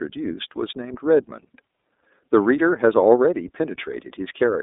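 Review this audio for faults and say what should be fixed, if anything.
iLBC codec damage runs throughout: the speech is confined to 250 Hz to 3.7 kHz and sounds plainly rough and synthetic, which fits independently coded 30 ms frames at about 13.3 kbps. Prevent it by carrying the call over a wideband codec at a higher bitrate instead of iLBC.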